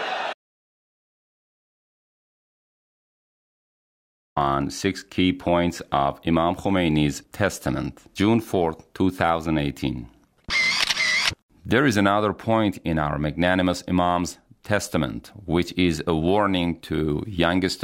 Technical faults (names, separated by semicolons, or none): audio dropout to silence